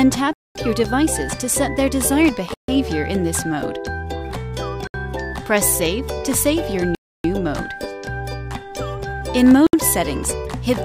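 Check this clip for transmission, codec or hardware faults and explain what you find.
Yes, there are five short gaps where the audio drops to silence, each consistent with a Bluetooth stall. They fall at 0.33 to 0.55 s (about 220 ms), 2.54 to 2.68 s (about 140 ms), 4.87 to 4.94 s (about 70 ms), 6.95 to 7.24 s (about 290 ms) and 9.67 to 9.73 s (about 70 ms). The likely cause is radio interference delaying packets until the headphones' buffer emptied, so playback halted until retransmissions caught up. The gaps are clean, complete silences of uneven length at irregular spacing. That sets them apart from codec packet-loss concealment, which fills the gap with smeared or repeated sound instead of going quiet.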